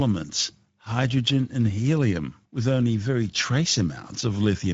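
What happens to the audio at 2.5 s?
At 2.5 s the speech sounds hoarse and grainy, with nothing above 7.7 kHz. This is Speex codec damage, present throughout, consistent with a low bitrate near 17 kbps starving the excitation.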